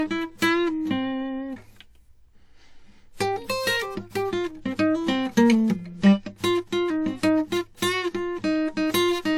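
From start to finish, the music carries two layers of compression damage that point to transcoding between lossy codecs, most likely a WMA encode near 64 kbit/s followed by HE-AAC near 48 kbit/s. The second encoder spends its limited bits reproducing the first one's artefacts and then adds its own, so the highs sound smeared and watery, with a synthetic top. A spectrogram would show a hard ceiling left by the lowest cut-off in the chain, with patchy, blocky energy beneath it.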